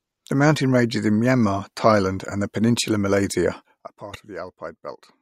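Corrupt frame decoded at 4.14 to 4.17 s: a few damaged compressed frames were played anyway, misplacing energy across frequencies as a brief blip peaking around -20 dBFS.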